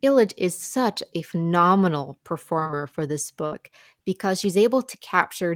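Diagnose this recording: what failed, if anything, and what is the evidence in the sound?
Network stage: repeated packet loss (robotic sound) from 2.59 to 2.76 s. Four short gaps, none over 19 ms, are patched with copied sound, giving choppy speech with pieces missing rather than one hole.

Network again: a burst of packet loss at 3.46 to 3.53 s. The last sound is held and faded for about 56 ms, then speech resumes with roughly 60 ms missing. It is a single continuous gap, not chopping.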